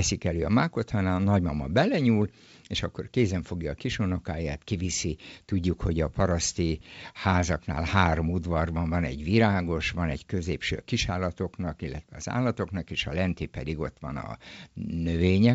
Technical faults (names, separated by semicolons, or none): none